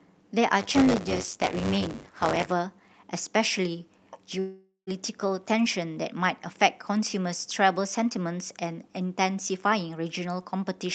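From 0.59 to 2.53 s there's buffer tearing: the writer and the hardware reader have slipped, so a small slice of every period replays audio from a few tens of milliseconds earlier, hard-spliced on both sides. It comes across as a 100 Hz robotic buzz riding on the speech.

Then from 4.39 to 4.90 s you get what's likely a long network dropout. The sound smears into a fading buzz, drops to near silence for about 0.13 s, and picks up again with roughly half a second of speech simply gone. Through all of it the Opus call path's top end stops at 8 kHz.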